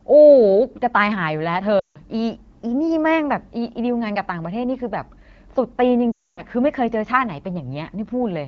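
Speech, carried over AMR wideband at what sounds like 12.65 kbit/s, with two patches of lost AMR speech frames. From 1.79 to 1.98 s and again from 6.12 to 6.43 s, the voice drops to near silence within two frames. The decoder is repeating its last good pitch and vocal-tract settings at falling gain. The gaps last 160 ms and 260 ms, which fits runs of about 8 and 13 frames. Each time the voice returns briefly weak or rough.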